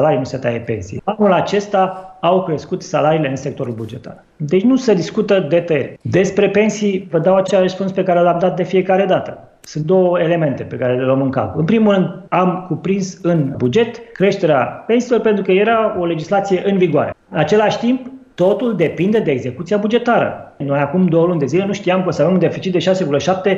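At 7.46 s to 7.50 s the audio hits a fault of repeated frames. A short block of compressed audio was delivered twice, so the decoder plays the same slice again. The repeated block lasts 26.1 ms, which points to a single frame played one extra time. It is heard as a brief stutter. The audio runs 26.1 ms longer as a result.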